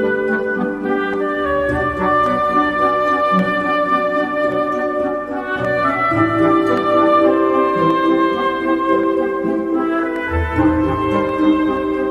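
Clock drift buffer slips run from 1.14 to 11.29 s: about ten clicks every 1.13 s, likely two mismatched clocks, roughly 150 ppm apart, forcing a few samples to be dropped or repeated.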